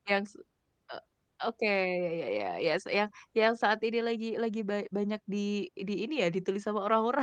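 No technical faults are present in this speech clip; the Opus voice compression is working as designed, keeping the full audio band with only the light coding texture expected of a voice-oriented setting around 20 kbps.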